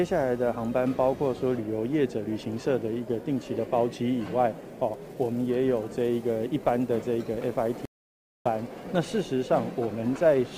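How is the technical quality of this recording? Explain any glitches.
One glitch: a stream reconnect at 7.85 to 8.48 s. The connection dropped and a fresh decoder restarted mid-stream, leaving about 0.6 s of silence before the audio resumes around 0.7 s further along.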